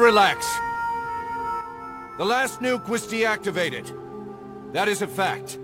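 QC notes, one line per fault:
1.61 s to the end, one channel drops out: at 1.61 s the level falls abruptly by about 6 dB and stays down through the final moment, with no recovery. This is likely the loss of one stereo channel ahead of the mono sum. Content shared by both sides then reaches the sum from only one side, at half amplitude, which gives the 6 dB step, and anything carried only on the missing side disappears.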